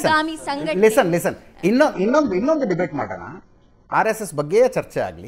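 From 1.94 to 3.94 s the adaptive stream switched to a lower bitrate, which suggests the connection slowed. The change comes abruptly with no gap: nothing remains above 7.9 kHz, and codec artefacts thicken, fitting a very low-rate HE-AAC version near 8 kbit/s.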